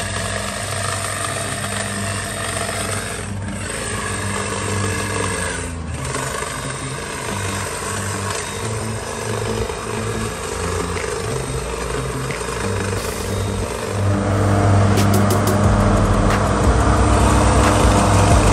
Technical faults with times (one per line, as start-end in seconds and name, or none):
none